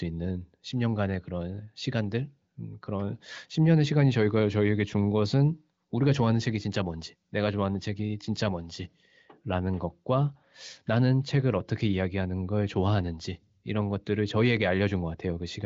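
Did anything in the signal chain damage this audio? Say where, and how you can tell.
No, nothing in the chain seems to have harmed this speech; it sounds like it went through the AMR wideband (HD Voice) codec at a high rate of about 23.05 kbit/s, and the empty band above about 7.6 kHz is simply that codec's normal ceiling.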